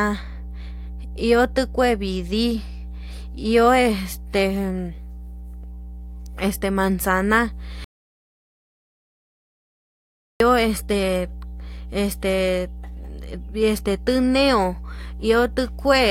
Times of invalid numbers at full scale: none

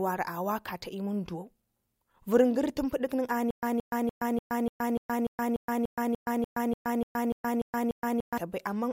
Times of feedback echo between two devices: none

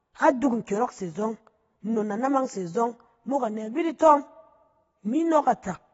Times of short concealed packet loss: none

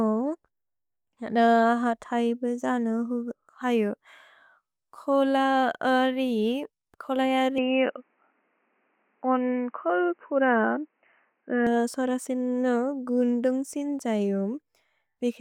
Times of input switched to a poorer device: 7.58-11.67

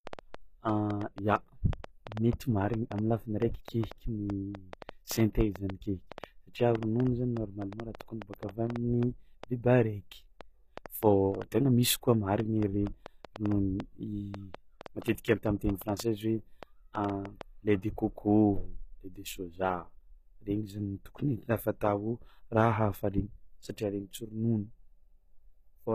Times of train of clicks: 0.07-17.42

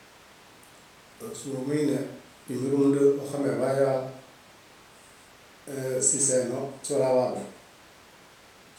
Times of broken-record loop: none

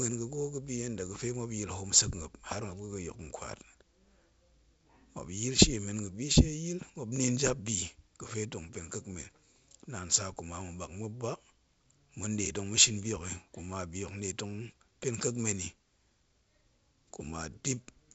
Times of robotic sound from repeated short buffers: none

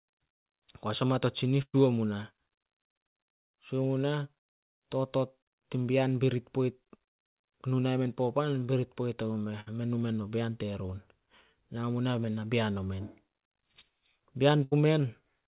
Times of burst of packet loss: 1.62-1.75, 9.60-9.68, 14.63-14.73

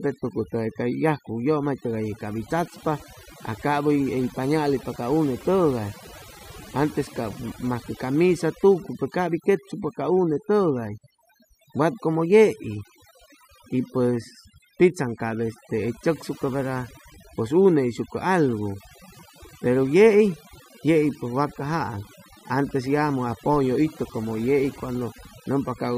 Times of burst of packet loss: none

